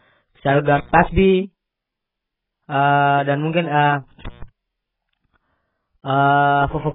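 A speech clip with heavy lossy coding throughout. Nothing is present above 3.7 kHz, so the sound is dull and smeared, with a warbling, fizzy texture. The likely cause is AAC compression at a very low bitrate, around 8 kbps. The encoder drops high bands and crudely quantises the rest. There are two intermittent contact dropouts. The first runs from 0.76 to 0.98 s. The second runs from 4.25 to 4.43 s, just after "dan mungkin". Each time the line opens for about 135 to 143 ms, and the sound cuts out with crackle at both edges.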